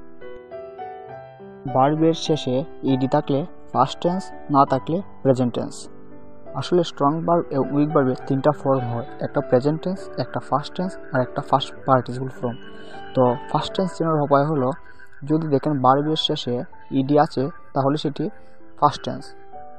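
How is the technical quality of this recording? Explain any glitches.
No glitches or technical faults are audible anywhere in the recording.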